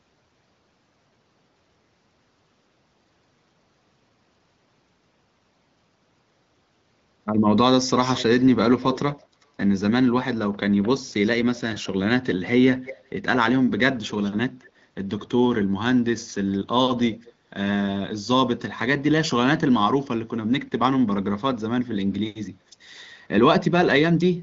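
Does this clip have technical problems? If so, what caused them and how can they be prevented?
Yes. A delayed second copy of the speech trails the main voice from 7.87 to 9.24 s, 12.79 to 13.09 s, 13.78 to 15.66 s and briefly at 17.21 s, lagging by roughly 210 ms. It is strongest in the first stretch, about 10 dB below the speech, weaker in the middle two and about 30 dB below the speech at the end. This is likely echo leak: one end was on a loudspeaker, and its echo canceller let part of the returning voice through. Using a headset or a device with better echo cancellation on the loudspeaker side prevents it.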